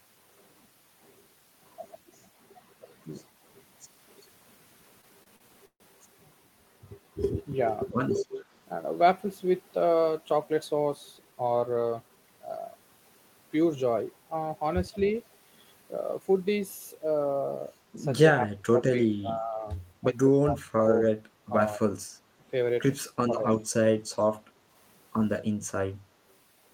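A speech recording with four kinds of network and echo-control fault. From 5.01 to 5.82 s there are repeated stalls (stutter). The jitter buffer ran dry four times, the longest gap being 138 ms. The receiver stretched the last sound to cover 226 ms, about 28% of that span. Nothing is lost, but the speech drags and catches. Speech suppressed in double talk appears at 8.20 to 8.36 s, 18.47 to 19.66 s, 20.45 to 21.12 s, 21.49 to 22.11 s and 23.29 to 23.87 s. The level dips and breaks up, falling by roughly 20 to 35 dB at its deepest. The likely cause is an echo canceller turning this talker down while the far side also spoke. An echo leak follows at 8.36 to 8.45 s and returns at 14.99 to 15.10 s. A faint copy of the speech comes back 221 ms late, roughly 25 to 30 dB below it. This is likely loudspeaker pickup that the far-end canceller failed to remove. A jitter buffer speed-up runs from 10.74 to 12.30 s at 110% speed and from 15.82 to 16.21 s at 108%. 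Short pitch-period pieces were cut out to shed excess delay, roughly 150 ms and 40 ms in total. The speech sounds hurried but keeps its pitch.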